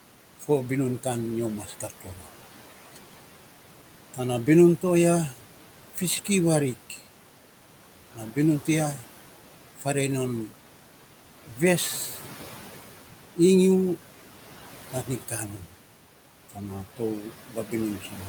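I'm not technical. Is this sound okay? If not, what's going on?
No. Noise suppressor artifacts run through the whole clip. A cleanup filter keeps pushing down the steady background noise in small slices of time, so the leftover noise dips between phrases and comes back under the speech.

Speech cut by the noise suppressor happens from 1.67 to 2.25 s, 14.93 to 15.72 s, and 16.49 s to the end. The filter mistook quiet parts of the speech for background noise and turned them down, so those bits sound faint or swallowed.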